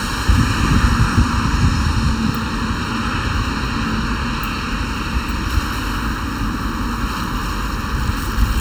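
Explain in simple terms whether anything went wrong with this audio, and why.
The sound is hollow and phasey the whole way through, as if heard down a tube, with some tones thinned out. This is channel delay (comb filtering). One of the two channels arrives a fraction of a millisecond later than the other, and when they are mixed into one, the parts they share cancel at regularly spaced pitches. The first of these gaps sits around 700 Hz, and the rest repeat at even steps above it.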